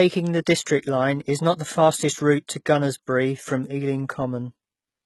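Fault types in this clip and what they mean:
HE-AAC compression: Throughout the speech the treble sounds synthetic, with s sounds turning gritty and lispy and nothing at all above about 11.8 kHz. This is likely HE-AAC coding at a very low rate, with the heavy damage fitting something near 16 kbps. Only the lower spectrum is coded, and the upper bands are rebuilt by copying lower content upward under a coarse envelope, so the top harmonics no longer match the real ones.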